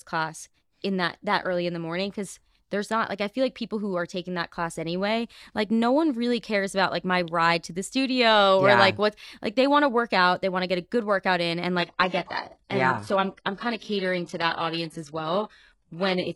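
Adaptive stream at a lower bitrate from 11.79 s to the end at 16.35 s of this speech clip, right after "good workout in and". A slowed connection forced an abrupt, gapless switch to a leaner encode, cutting everything above 11.5 kHz and leaving synthetic treble that fits HE-AAC near 12 kbit/s.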